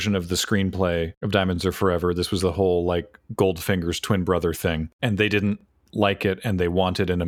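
Overlapping chunks at 1.56–1.58, 3.58–3.61 and 5.61–5.63 s (after "of the screenplay of", "was the whole like" and "thing and they didn't") in this speech recording: each 2.0 s chunk begins 23 ms early, so that sliver replays as a brief stutter.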